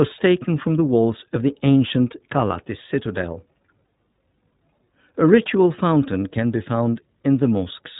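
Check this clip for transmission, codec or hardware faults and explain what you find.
One fault is present, running through the whole speech clip: iLBC codec coding. Each frame's excitation is coded on its own, consistent with 20 ms frames and the 15.2 kbps mode, so the speech is plainly rough and slightly synthetic, with nothing above 3.8 kHz. That rough, synthetic coding texture on top of the 3.8 kHz ceiling separates it from simple band-limiting.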